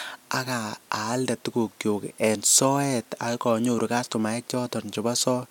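No technical faults can be heard at any point in the speech; the signal stays continuous and steady throughout.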